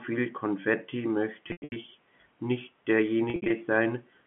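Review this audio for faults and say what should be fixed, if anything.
Packet loss with pitch repetition occurs at 1.48–1.76 s (about 220 ms missing, longest gap 100 ms) and 3.30–3.50 s (140 ms, longest 60 ms). Concealment repeats the last pitch period, so the sound turns buzzy and held before fading. On a spectrogram, frozen harmonic stripes decay into blank patches. Larger jitter buffers and forward error correction on the link would prevent it. The telephone-band G.711 coding, limited to roughly 150 Hz–3.4 kHz, carries through as expected.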